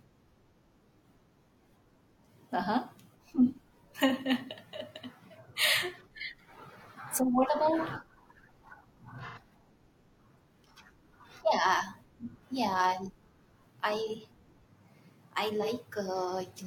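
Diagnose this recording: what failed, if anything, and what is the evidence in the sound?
Codec stage, AAC frame loss with concealment: at 9.27–9.38 s and 15.62–15.68 s, speech briefly smears into noise as the decoder reuses the last good spectrum. Gaps of 85 and 43 ms fit two lost frames and one. Spectrograms show harmonics blurring there.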